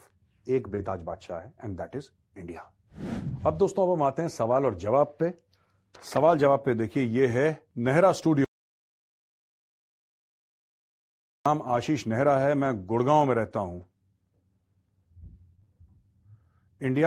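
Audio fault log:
0.75–0.79 s, short concealed packet loss: About 20 ms of audio never reached the decoder in time, so the receiver filled that slot by extending the sound just before it, then eased back into the real signal. You hear a brief smear or small wobble right near the start, and any short consonant falling in that window could get swallowed. The next 20 ms was rebuilt from error correction instead.
0.77–0.79 s, 3.27–3.29 s, 6.29–6.31 s and 11.67–11.77 s, lost packet rebuilt from error correction: Each of the first three is a single 20 ms packet. The last is three packets, 60 ms in all. The following packet carried a low-bitrate backup copy, and the decoder played that, so nothing drops out. Those moments come through rougher and a bit noisier than the surrounding speech, like a momentary dip in quality rather than a gap.
8.45–11.46 s, audio dropout to silence: The sound cuts off mid-flow and stays at dead silence for about 3 seconds, with no room tone underneath. 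It then comes back abruptly. That silence points to the input going away, likely a disconnected device, a dropped link or an accidental mute, while recording or encoding carried on writing silence. Whatever was said in that stretch is simply gone.
13.81–15.82 s, scattered short gaps: Across these two seconds a few separate packets, around three, went missing or arrived late, none longer than roughly 20 ms. The receiver patched each one by continuing the previous sound, and concealment covers only a few percent of the span. The speech stays clear but picks up brief ticks or smears where the patches sit.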